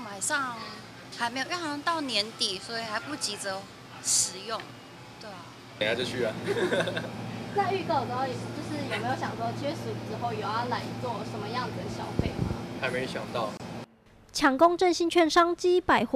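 A short silence of about 25 ms opens in otherwise continuous sound from 13.57 to 13.60 s, a gap at a join of encoded pieces. Two separately encoded sections were butted together with the encoder's start-up delay and final-frame padding left in. The edges are smeared by the codec, and the sound resumes exactly where it stopped. That single gap with nothing skipped sets it apart from a packet-loss dropout or a recurring buffer underrun.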